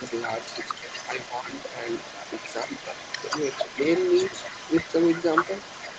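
Right from the start, at 0.00 to 0.04 s, the speech dips hard, about 10 dB, for only a few hundredths of a second. That's speech suppressed in double talk. With the far side talking at the same moment, the echo canceller couldn't tell the local talker from the loudspeaker echo and likely pulled both down together. The same thing happens more gently, about 5 dB, across 1.2 to 1.53 s and again at 2.64 to 2.71 s. Those read as brief sags in level rather than full dropouts.

Underneath all of that, for the whole clip, the other side's voice is leaking through, sitting roughly 15 dB below the main speech. The talker's device is playing the far end out loud, and the echo canceller likely didn't strip all of it from the microphone. You hear a second, quieter voice trailing along in the background the entire time.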